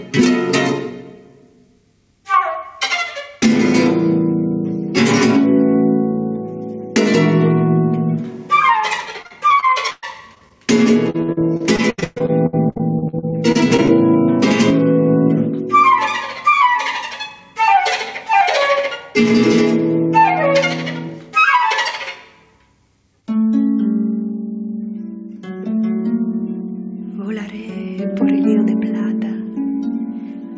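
Gain pumping runs through the whole clip. The gain swings by roughly 10 dB under loud sounds, likely from a fast limiter fighting excessive gain.

From 9.22 to 10.52 s, and again from 11.1 to 13.9 s, repeated packet loss makes the sound choppy and robotic. Holes up to about 0.12 s are filled by continuing the last sound. About 22% of the first stretch and 29% of the second are patched.

Nothing is heard above 8 kHz, which fits a G.722 call codec.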